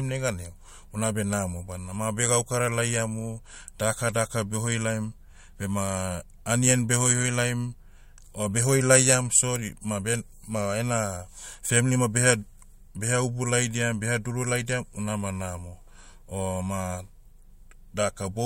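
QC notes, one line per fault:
9.56 s and 14.56 s, electrical switching spike: a sharp snap or tight cluster of clicks lands right after "o behoi laiam" and again right after "ubu laidiam beha duru", each peaking at about -15 dBFS and lasting only a millisecond or two. The likely cause is a nearby switch or discharge arcing into the line. Unlike a digital dropout or buffer glitch, the speech underneath carries on unbroken; the snap sits on top of it rather than cutting a gap.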